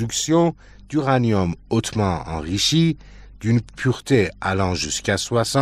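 No technical fault can be heard anywhere in the signal.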